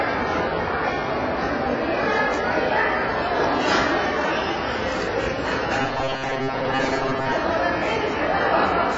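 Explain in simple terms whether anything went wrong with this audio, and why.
Throughout, the sound is dull and muffled, with nothing at all above about 7.6 kHz, and it has a smeared, fizzy or warbling texture. This is AAC compression, most likely squeezed very hard. To save space, the encoder throws away the highest frequencies entirely and codes the rest coarsely, keeping only what a model of hearing judges most important. That coarseness leaves a blurred, watery quality on sustained sounds and on hissy ones.

From 5.82 to 7.32 s, the sound turns into a hard, metallic buzz pitched at about 133 Hz. It still loosely follows the original, but it sounds mechanical. This is robotic sound from repeated short buffers, likely caused by new audio arriving too slowly. To fill the gaps, the playback keeps looping the last tiny slice of sound, about 7.5 ms long, and skips most of the real audio. 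Repeating that slice over and over adds a steady buzz at a fixed rate, which is the buzz you hear.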